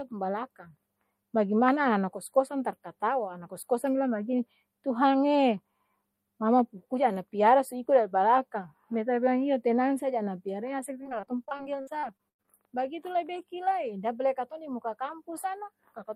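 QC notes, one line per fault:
Throughout: channel delay (comb filtering). One channel runs a few samples behind the other, well under a millisecond, so the mono sum cancels at evenly spaced frequencies starting around 7 kHz. That gives a fixed, slightly dulled, phasey top end that never moves, unlike a sweeping flanger or a codec's shifting artefacts.
11.03 to 12.50 s, ending just before "bagitu lai beki": repeated packet loss (robotic sound). Gaps recur in quick succession, the longest 96 ms, and each is bridged by stretching the last sound, so roughly a quarter of the span is patched. The result is choppy speech with pieces missing rather than one isolated dropout or a steady buzz.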